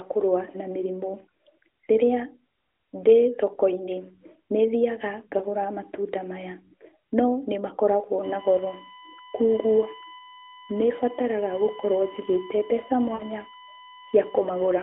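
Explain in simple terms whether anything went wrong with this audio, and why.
Lost AMR speech frames happen twice. At 5.38 to 5.44 s, just before "matunda maya", one 20 ms piece of the phone signal arrived damaged. The decoder patched it by repeating the last good sound, so there is a tiny dip. At 13.14 to 13.23 s, a 60 ms gap, which fits three missing frames, makes the sound smear and fade briefly.

A USB whine starts at 8.23 s, right after "no nĩmakoragwo", and lasts to the end. It is a steady 1 kHz tone with sharp overtones reaching up to 20 kHz. It likely comes from a USB connection leaking electrical noise into the audio. It is quieter than the speech.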